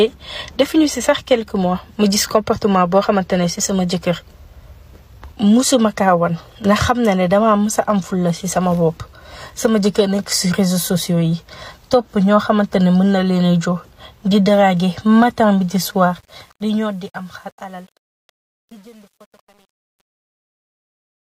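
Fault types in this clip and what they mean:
Truncation distortion on a fade: the fade-out was processed at too few bits with no dither, in a way that fits an 8-bit stage, so the falling level gets rounded to a handful of coarse steps. From 15.94 s the tail stops sounding clean. From 16.87 s to the end the quietest part turns gritty and square-edged.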